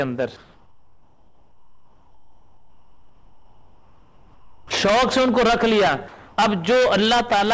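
The audio comes through a call path whose band stops at 8 kHz, which fits G.722 at 64 kbps. From 0.37 to 4.71 s, comfort noise replaces the background: the real background, about 34 dB below the loud parts, gives way to a steady, featureless hiss about 8 dB quieter. This is likely discontinuous transmission. Unlike a noise gate, it fills the pause rather than leaving silence. Unlike noise reduction, it has no pumping or residual detail. From 6.08 to 6.38 s, sound is dropped by the voice detector: roughly 160 ms of sound vanishes into the same flat noise for 300 ms. The likely cause is the detector mistaking it for background. Packet-loss concealment would smear or repeat the surrounding sound, but here it is cleanly swapped for noise.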